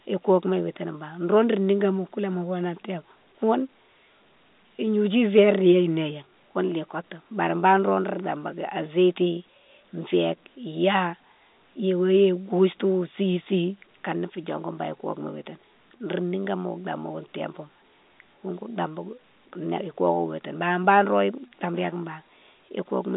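No technical faults are audible.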